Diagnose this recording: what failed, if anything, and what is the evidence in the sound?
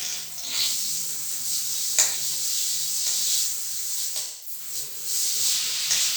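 At 1.18 s there is a single sharp click, a thin vertical line across the whole spectrogram. On the waveform it is a step where the trace jumps straight to a later value. It is likely dropped samples at the driver or buffer stage, with a couple of samples lost, far too few to remove any audible sound.

From 4.22 s to 4.60 s the sound turns smeared, noisy and phasey. This is AAC frame loss with concealment at the codec stage, lasting about 0.21 s, which fits a run of five lost frames. The decoder rebuilt the gap from the last good spectrum, so the spectrogram shows a blurred, texture-less patch and the waveform loses its normal detail.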